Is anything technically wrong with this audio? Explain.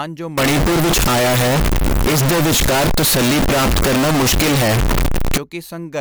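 Yes. From 0.38 to 5.38 s the speech was likely affected by a float read as integer fault: 32-bit float samples interpreted as 32-bit integers, so sign and exponent bits dominate. The waveform turns nearly square at an almost fixed, high level, very loud and harsh, with noise matching the speech, though pitch remains traceable.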